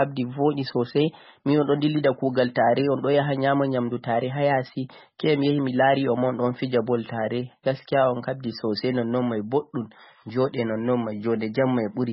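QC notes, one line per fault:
Throughout, MP3 compression: nothing above 5.6 kHz and a heavy watery swirl as weak bands flicker in and out, likely an encoder starved of bits, which fits about 16 kbps.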